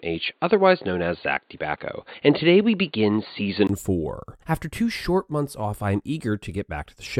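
From 0.0 to 3.69 s the speech is dull and boxy, with nothing above 4.6 kHz; at 3.69 s a brief gap precedes fuller sound. That gap, plus shifts in level and background noise, marks the likely cause: an input switched to a poorer device, not a filter.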